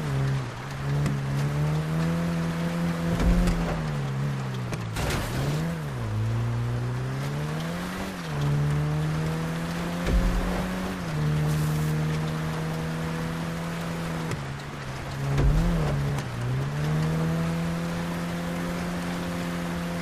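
At 16.06 to 16.09 s, damaged data in the compressed stream makes the decoder misread frames and lose sync, producing a brief chirp, squawk, click or short hole in the sound.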